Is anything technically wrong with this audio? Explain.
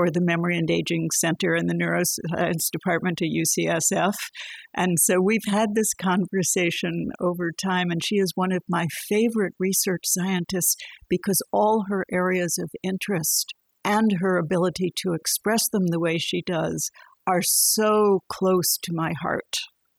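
Yes. Overdone noise removal runs through the whole of this speech recording. A noise reduction stage was set far too aggressively. It cuts individual frequency bands deep or shuts them off entirely whenever their level sits close to its noise estimate. The softer parts of the voice fall below that line and get removed along with the noise. The background drops and breaks up into twinkling, chirpy specks.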